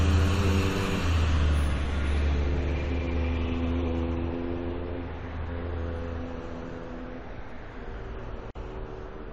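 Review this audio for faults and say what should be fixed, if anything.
Gap at a join of encoded pieces, 8.51 to 8.55 s: a silence of about 47 ms breaks the continuous sound and then it resumes where it stopped. Separately encoded segments were joined untrimmed, leaving one run's padded final frame and the next run's start-up delay. To prevent it, encode the material as one continuous pass, or trim each segment's encoder delay and padding before joining.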